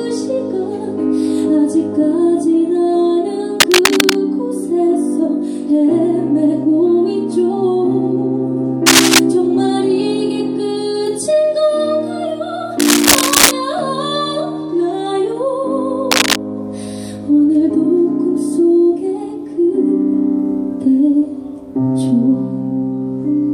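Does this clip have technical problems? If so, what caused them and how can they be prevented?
Yes. Cable scratch noise appears at 3.57–4.16, 8.86–9.19, 12.79–13.52 and 16.11–16.36 s. These are rough, uneven bursts of scratching, as loud as the sound itself or louder. The likely cause is a worn cable or connector moving. Replace the cable and secure it.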